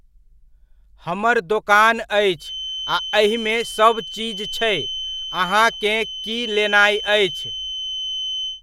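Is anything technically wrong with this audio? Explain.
Yes. From 2.35 s until the clip ends, a thin, steady 3.1 kHz whistle runs behind the speech, roughly 10 dB below it and swelling and fading slowly in level. This is likely a feedback whistle: the loudspeaker-to-microphone loop hovers at the edge of feedback, sustaining that one tone without it running away.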